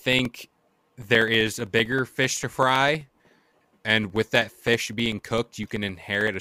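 A steady train of small ticks runs through the speech from about 0.06 s to 6.34 s, repeating every 0.064 s, roughly fifteen to sixteen times a second, and audible only where there is signal. These are periodic USB or driver dropouts: something blocks the USB bus or audio driver at a fixed interval, and each time about 2 ms of audio is lost and replaced by silence, leaving a brief gap that clicks.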